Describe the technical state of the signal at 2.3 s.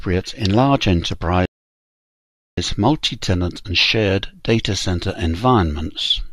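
At 2.3 s the signal is silent, in the middle of a rebuffering stall. The stall runs from 1.46 s to 2.58 s. The player had used up its downloaded audio and paused until more data arrived. The speech cuts off abruptly into silence. It then picks up exactly where it stopped. No speech is skipped. The gap simply adds about 1.12 s to the clip.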